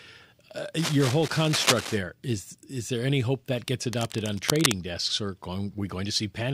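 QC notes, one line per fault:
0.78–1.97 s and 3.92–4.72 s, cable scratch noise: dense, uneven crackling bursts sit only a few dB below the speech, likely from a worn cable or connector being moved so its contact resistance flickers; spectrograms show ragged broadband vertical streaks, and waveforms show jagged spiky clusters over the signal.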